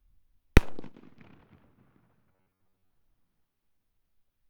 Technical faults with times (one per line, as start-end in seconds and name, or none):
2.33-2.90 robotic sound from repeated short buffers